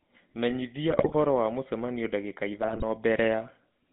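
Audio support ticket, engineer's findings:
Buzzy, gravelly roughness on all speech, band roughly 150 Hz to 3.6 kHz. GSM full-rate codec: pulse-excited vocal-tract model, fits the 13 kbps full-rate path, plainly audible damage.

Squawks, pops and gargling, 0.90–1.15 s and 2.62–2.83 s. GSM bit errors on a weak radio link: corrupted filter, pitch and gain values distort spectrum and level for several frames.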